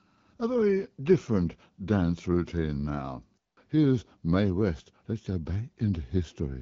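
No technical faults occur anywhere in the speech, which comes through AMR wideband (HD Voice) coding at 12.65 kbit/s.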